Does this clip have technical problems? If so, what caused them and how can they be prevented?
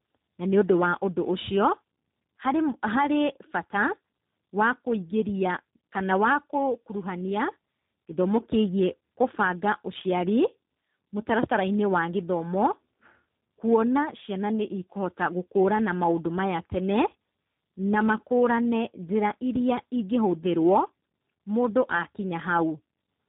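Yes: tandem speech coding throughout, four codecs in a row ending at 8 kbit/s, each re-coding degraded output; the spectrogram stops near 3.8 kHz with smeared, warbly harmonics. Prevent it with end-to-end codec passthrough or transcoder-free routing.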